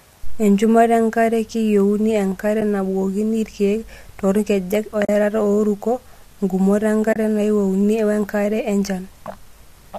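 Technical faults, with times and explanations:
2.61 s, 5.05–5.09 s (just after "irkiek toorkejek") and 7.13–7.16 s: AAC frame loss with muting. Lost frames are zeroed, so overlapping windows fade the sound out and back in, leaving a brief dip and soft-edged holes. Gaps of about 10, 40 and 30 ms fit 10 ms frames, likely from low-delay AAC-ELD.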